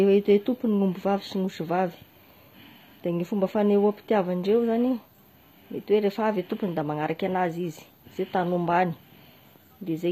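From start to finish the speech has a bright but synthetic-sounding top end: s sounds come across gritty and lispy, with a metallic sheen that doesn't match the body of the voice. This is likely HE-AAC compression, which rebuilds the treble by copying lower bands upward, and the damage level fits a bitrate around 24 kbps. On a spectrogram the upper band shows repeated, blocky patches instead of true harmonics, and nothing appears above 15.2 kHz.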